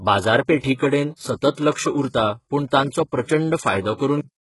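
From the start, the treble sounds rebuilt rather than recorded. Nothing reaches above 11.5 kHz. The damage is heavy. This is likely HE-AAC compression at a very low bitrate, near 12 kbps. Upper bands are copied from lower ones, so harmonics misalign and s sounds turn gritty, metallic or lispy.

At 4.21 s the cut-off end arrives. The final buffers were never written or played. The sound stops mid-sound and drops straight to silence, with no natural decay, through to the end of the clip.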